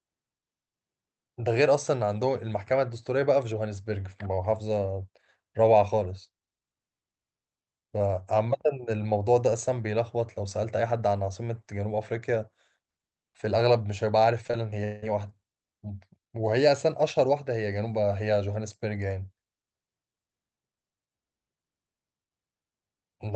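From 14.47 to 15.04 s, repeated packet loss (robotic sound) breaks the speech into choppy fragments: four holes, the longest 182 ms, patched by stretching earlier sound, leaving repeated smeared blocks on the spectrogram, which tops out near 8 kHz.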